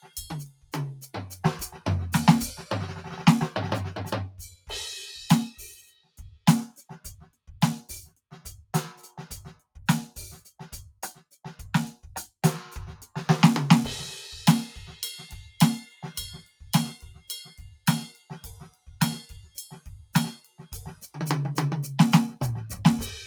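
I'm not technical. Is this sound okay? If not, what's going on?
No. The whole piece of music has a slight, restless pumping, with held sounds and lingering tails thinning out while sharp hits come through. That is a noise suppressor built for speech, applied here to music, mistaking steady musical sound for background noise.

In places it goes further: the sound cut by the noise suppressor drops sharply and briefly, at 0.00–1.38, 4.30–4.70, 5.53–6.45, 16.42–16.61, 17.78–18.30, 18.69–18.87 and 20.38–20.59 seconds. Sustained or fading parts sink or get cut short there.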